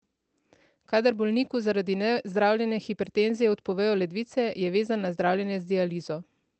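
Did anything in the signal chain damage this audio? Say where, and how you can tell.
No, nothing in the chain has damaged this speech, which simply carries the character of a WebRTC call path, with the top end stopping at around 8 kHz in the way a fairly low-bitrate Opus call does.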